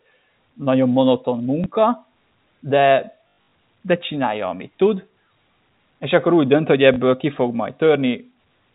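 Packet loss with last packet repeated at 1.64–1.66, 3.24–3.52, 5.34–5.36 and 6.94–6.96 s replays stale audio, not silence, and the longer burst buzzes near 50 Hz, fitting 20 ms packets.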